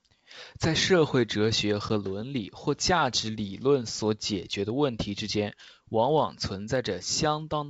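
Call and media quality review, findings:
Packet loss on an ADPCM call, 1.89–1.91 s, between "社会哲学" and "伦理或价". About 10 ms hard-edged dropout, roughly one packet, in the G.722 stream. Waveform shows a flat silent gap, spectrogram a full-band blank stripe. On resumption, slight distortion while the decoder's predictor and step size resync.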